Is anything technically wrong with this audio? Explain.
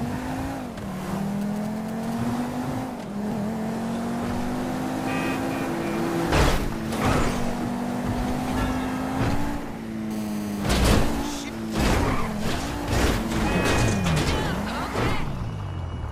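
Yes, there's radio interference from a nearby 2G phone, showing up twice in two different forms.

From 1.41 to 2.14 s there are GSM signalling bursts: a galloping dit-dit-dit run of short buzzy blips, sitting roughly 20 dB under the main sound. The phone was just signalling with the network, sending brief clusters of radio pulses at 216.7 Hz. Something in the audio chain rectified them, turning each cluster into a little burst of audible junk.

From 10.11 to 11.40 s it's the full GSM phone buzz, a hard, raspy drone at 216.7 Hz packed with harmonics and about 18 dB below the main sound. Here the phone was on a call, transmitting steadily at that burst rate, so the rectified pulses became a continuous buzz that has nothing to do with the audio itself and just sits on top of it until the transmission stops.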